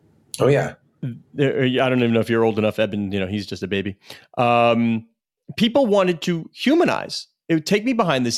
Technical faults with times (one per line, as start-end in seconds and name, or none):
none